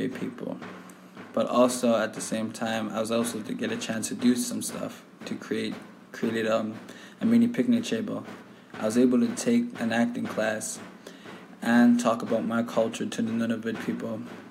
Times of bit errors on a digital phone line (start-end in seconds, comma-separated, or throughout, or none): none